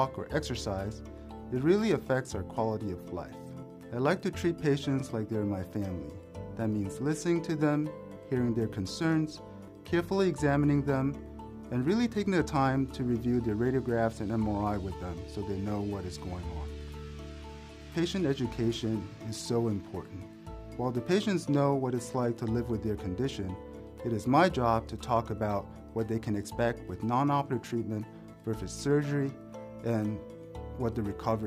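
No technical faults can be heard anywhere in the recording.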